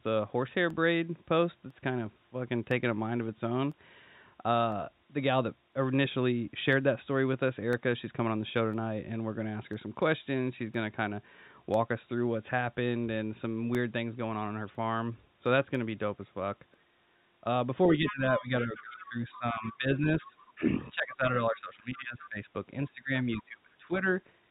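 From 0.70 s to 16.74 s, periodic USB or driver dropouts give a tick once every 1.0 s, about fifteen in all. Each is a sub-millisecond gap of silence, a sharp notch in the waveform and a thin vertical broadband line on the spectrogram.

From 17.97 s to 22.48 s the speech dips repeatedly by up to around 20 dB, about three seconds in total. This is likely speech suppressed in double talk, and it shows as ragged holes in the waveform envelope.

Within that span, the other side's voice leaking through appears as faint fragments at 18.08–18.42 s, 18.75–19.06 s, 19.62–19.77 s, 20.20–20.26 s and 22.19–22.26 s. These are likely residual echo, roughly 10 to 25 dB below the main speech, and appear as weak, separate harmonic traces on the spectrogram.

From 22.89 s to 24.06 s a second stretch of speech suppressed in double talk cuts about a second of level by up to roughly 20 dB, likely from the same echo-canceller clamping. 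Across the clip the spectrogram is empty above 4 kHz, which fits the G.711 call codec.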